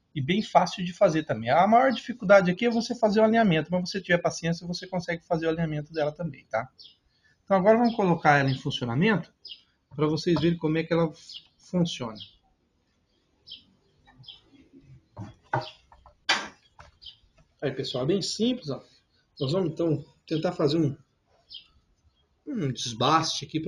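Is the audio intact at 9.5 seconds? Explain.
No. From 9.25 to 9.98 s the sound is cut by the noise suppressor. It mistakes this passage for noise and pulls it down by up to about 19 dB, around half a second in all. Sustained parts and decays sink while sudden onsets survive. On a waveform the envelope caves in with short tails; a spectrogram shows faded energy between sharp attacks.

This sits within the noise suppressor applied to the sound throughout. Its gain swings by around 20 dB, so the audio pumps and thins, visible as a fluttering, uneven envelope.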